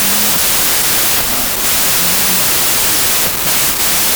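From the first moment to the end, the speech sits under a wall of harsh noise. That's a wrong sample width: the audio was stored as packed 24-bit integers but read back as 16-bit, so most values are stitched from mismatched bytes and only some keep the top bits of the real signal. Each second of data becomes one and a half seconds of samples, so the speech plays at about two-thirds speed and sounds lower in pitch.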